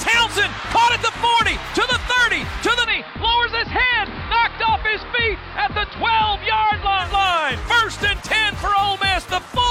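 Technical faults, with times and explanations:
2.8 to 7.1 s, digital radio blending to analogue: the receiver lost its digital signal and cross-faded, over about 107 ms, to the station's AM broadcast, returning to digital at 7.1 s. The AM path's narrow bandwidth dulls the treble throughout this stretch. Its noise adds a hiss sitting roughly 35 dB under the signal, and the level drops by about 1 dB.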